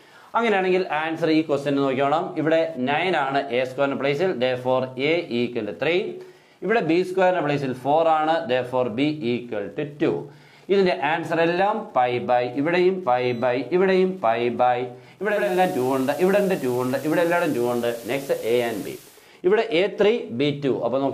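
From 15.18 s to 19.32 s a soft hiss rises to roughly 25 dB below the signal, with no jump in level, then clears. This is digital radio blending to analogue: the receiver lost the digital stream and cross-faded over about 0.44 s to the station's FM broadcast, later returning.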